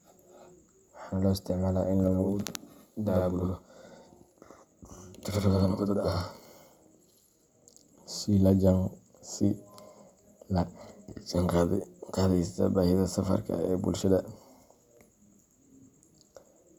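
A speech clip with a channel delay (doubling) fault from 2.08 s to 8.08 s. During that stretch, every sound is followed by a second copy at the same level, about 85 ms later. It comes across as a doubled, slapback effect rather than a natural echo. One channel is running late by a long buffer, and the two are then summed to mono. The gap fits a 4096-sample buffer at 48 kHz.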